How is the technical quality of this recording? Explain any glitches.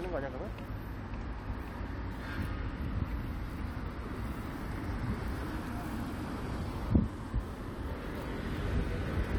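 No audible glitches or faults.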